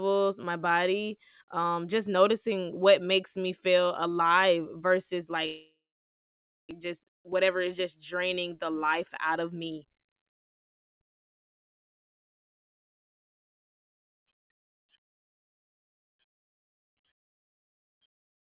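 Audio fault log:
5.46–6.73 s, long network dropout: Audio most likely stopped arriving for about a second. The receiver stretched the last sound into a fading buzz, and that gives way to near-silence lasting roughly 0.93 s before the signal returns. About 1 s of the original audio is simply gone, so the sound resumes further along. The playout delay also grows by roughly a fifth of a second across the gap.
6.80–9.85 s, jitter buffer speed-up: After the gap, the receiver was holding more buffered audio than it wanted, so it trimmed short pitch-period-sized pieces over and over to drain the excess. About a fifth of a second is removed this way. Over these three seconds the sound plays at about 107% speed with its pitch unchanged. It comes across as slightly hurried rather than higher, until normal pacing resumes.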